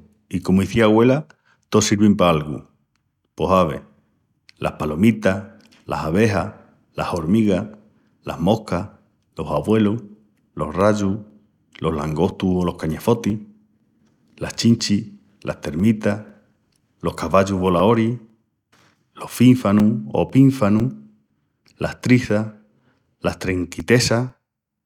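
From 10.80 s to 24.80 s the speech carries periodic USB or driver dropouts. Every 0.5 s a few milliseconds of audio vanish and are replaced by silence. This points to a task stalling the driver on a fixed schedule. It sounds like steady ticks under the voice.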